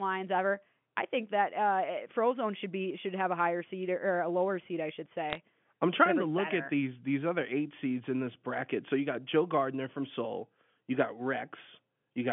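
At 5.30 to 5.37 s, bit errors on the digital phone line flip a small fraction of transmitted bits, each corrupting one G.711 sample. The result is a brief burst of sharp ticks and crackle, consistent with a few frames being hit, riding over the narrow 3.4 kHz telephone band.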